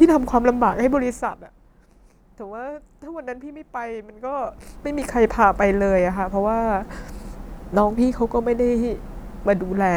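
From 4.13 to 5.04 s the speech carries zipper noise: a level change of roughly 20 dB is applied in unsmoothed steps, around forty per second, and each jump leaves a small click, producing a rapid ticking buzz that rides on the speech while the level moves.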